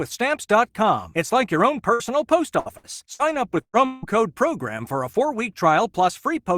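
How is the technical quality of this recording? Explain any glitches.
The speech has audible network damage, a cluster of short gaps followed by one longer break, all between about 1.9 and 4.1 s.

Burst of packet loss, at 1.93 s just after "like your own", then at 2.60, 2.78, 3.14 and 3.61 s: consecutive packets never arrived in time, so the receiver stretched and faded the last sound. Most fills last about 60 ms and sound like a brief held buzz or fading hiss. The 3.61 s one runs about 120 ms and ends in roughly 60 ms of silence.

Long network dropout at 3.85 to 4.05 s: this was likely a longer interruption in delivery. The final sound is carried on for about 170 ms as a fading buzz or hiss before the speech resumes, with roughly 180 ms of it skipped.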